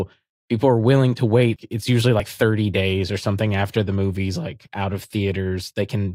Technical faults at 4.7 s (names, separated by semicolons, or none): audio missing between chunks